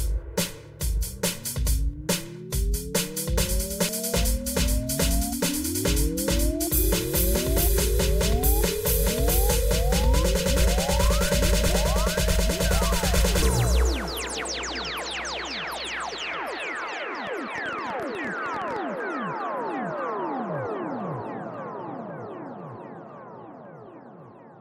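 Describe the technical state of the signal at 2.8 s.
The signal at 2.8 s is intact, with no dropout, clipping, glitch or other fault audible at that point in the sound.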